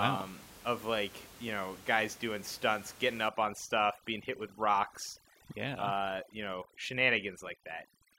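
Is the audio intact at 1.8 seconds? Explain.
Yes, the audio is intact at 1.8 s, with only the room's own background noise sitting about 20 dB below the speech.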